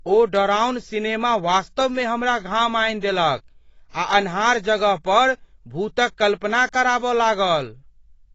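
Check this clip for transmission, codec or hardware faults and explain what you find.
One codec fault runs through the whole speech clip. AAC compression, throughout: nothing above 7.9 kHz, with dull, smeared, warbly sibilants, likely from an AAC-LC encoder starved of bits, consistent with about 24 kbps.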